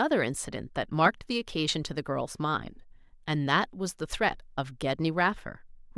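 No technical faults can be heard anywhere in the recording.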